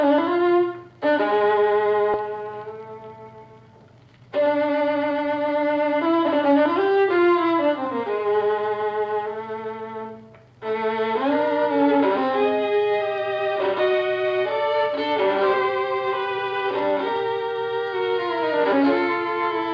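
At about 2.14 s there's a skip ahead: the audio jumps straight forward with no gap filled in, and something like 0.7 s of material just never plays. That's the jitter buffer (or the network) dropping a chunk while later audio was already queued up, so the two sides of the cut butt together almost seamlessly, and the receiver's delay shrinks by about the same amount in one go.

Then from 3.92 s to 5.93 s you get a jitter buffer speed-up. The buffer was holding more than it wanted, so the receiver kept snipping out short slices a pitch period or so long, over and over, to catch up. Playback runs at about 114% speed for those two seconds while the pitch stays put, and it comes across as noticeably rushed. In total roughly a third of a second gets trimmed. The audio throughout is band-limited to 8 kHz, which fits G.722 at 64 kbps on the call path.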